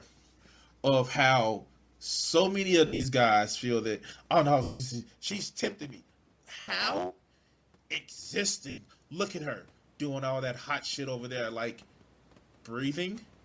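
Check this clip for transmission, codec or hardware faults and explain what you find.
Four kinds of fault can be heard in this speech clip: codec damage throughout, four dropouts from lost frames, a stretch of truncated blocks, and a gain swell near the end.

Bluetooth LC3 compression runs through the whole clip and is plainly audible. The damage points to a low LC3 bitrate, likely around 32 kbps with 10 ms frames. At that rate the encoder discards much of the upper spectrum and substitutes shaped noise, so the speech carries a breathy, grainy edge and sibilants sound hissy rather than crisp. The band ends at 8 kHz, but that limit comes from the call microphone processing, not from the codec.

Lost LE Audio frames occur at 2.87–3.06 s, 4.63–4.81 s, 6.60–6.68 s and 8.70–8.78 s. When frames go missing, the LC3 decoder repeats the last good spectrum with randomised phase and fades it if the gap continues. 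The first gap falls between "how so many of" and "guys feel that oh": 140 ms is lost in patches across 180 ms, with the longest run about 70 ms. The second follows "feel that oh no" and lasts 170 ms, long enough to smear and then sink toward silence. The last two last 80 ms each and come out as short, noisy blurs.

Block size mismatch (truncated) affects 5.26–8.3 s. An upstream stage writes blocks larger than the next stage reads, which fits a 512-sample block, and the tail of each block is dropped. Each cut leaves a small discontinuity, and together they produce a buzz at 91.9 Hz. The missing samples also make this stretch run 1.07 times faster while the pitch stays about normal. The level change of the talker moving near 5.0 s is separate from this fault.

Automatic gain rising runs from 8.41 to 11.87 s. The input fell by about 12 dB, and the gain control responded by raising its gain gradually, by about 5 dB over these three-plus seconds. 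Speech and room noise swell together. The background rising along with the speech is what distinguishes this from the talker simply moving closer.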